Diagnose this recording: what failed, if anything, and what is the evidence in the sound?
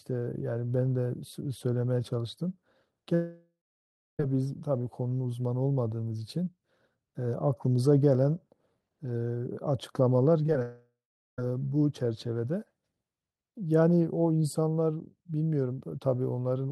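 The network stage most likely suffered a long network dropout twice, from 3.14 to 4.20 s and from 10.62 to 11.39 s. The receiver stretched the last sound into a fading buzz or hiss. Silence then took over for about 0.64 s and 0.42 s, and the speech resumed with that stretch missing.

Short concealed packet loss hit the network path at 10.47 to 10.49 s, 10.53 to 10.55 s and 10.59 to 10.61 s, each dropping about 10 ms. The decoder patched each gap from the preceding sound, which leaves brief smears or wobbles just before the second dropout.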